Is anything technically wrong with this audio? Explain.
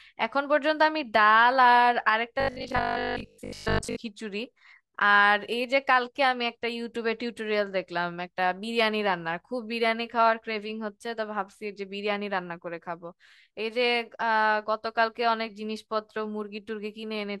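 Yes. Robotic sound from repeated short buffers, 2.40 to 3.98 s: the speech becomes a rigid, metallic 50 Hz buzz loosely following the words. Audio likely arrived too seldom, so the last 20 ms was looped through most of this stretch, skipping real audio.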